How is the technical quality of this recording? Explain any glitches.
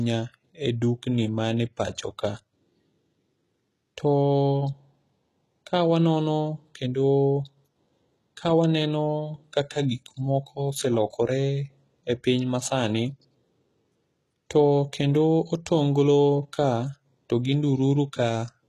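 The recording has plainly audible compression damage throughout. The speech sounds like HE-AAC compression, likely at a low bitrate such as 16 kbps. Its treble is rebuilt from copied lower bands, so s sounds turn gritty and metallic up to a 12.4 kHz ceiling. That bright but false treble is what sets it apart from simple low-pass dullness.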